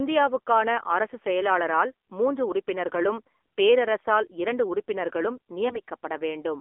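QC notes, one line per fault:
Throughout, AMR narrowband mobile codec: The speech sits in a narrow phone band, roughly 300 Hz to 3.5 kHz, with nothing at all up top, so sibilants go dull and the whole thing sounds boxed in. The damage is plainly audible, a buzzy, synthetic edge, which fits one of the lower AMR-NB modes around 7.4 kbps. At that rate the vocal-tract model gets very few pulses per 5 ms slice to rebuild each sound, so the voice loses its natural grain and turns reedy.
5.68 to 5.80 s, AMR bit errors: Right after "உறுப்பினர்களும் பேரரசரால் இரண்டு உறுப்பினர்களும்", there's a 0.12 s patch where the voice goes hoarse and gargly but keeps roughly the same pitch and level. That length fits about five damaged 20 ms frames, with something like one bit in ten flipped among the less protected bits. The core parameters survived, but the excitation pulses landed in the wrong spots and the fine gain and spectral values drifted, hence the scratchy texture.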